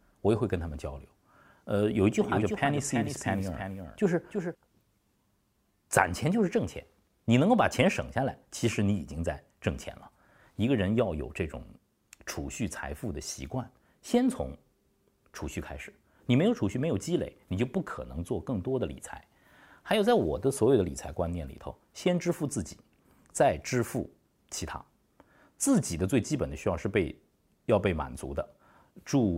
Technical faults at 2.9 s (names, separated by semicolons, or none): doubled audio track